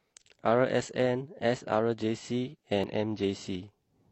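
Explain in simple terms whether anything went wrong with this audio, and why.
Around 2.79 to 2.93 seconds the speech jumps forward, losing roughly a twentieth of a second. These are compressed frames skipped: chunks of the encoded file were missing or rejected. Unlike a dropout, there's no silent gap.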